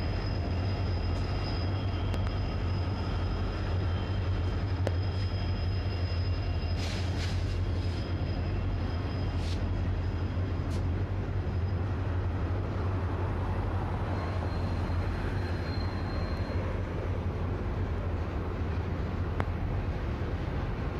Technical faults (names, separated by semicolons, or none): loud pop